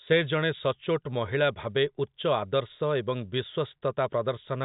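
Nothing goes wrong anywhere in this speech clip; it simply carries the narrow, phone-line sound of G.711 telephone coding, with nothing audible above about 3.8 kHz.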